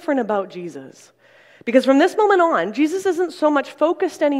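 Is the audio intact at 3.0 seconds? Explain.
Yes, at 3.0 seconds the audio plays through cleanly, with no dropout, click, distortion or other fault at that point.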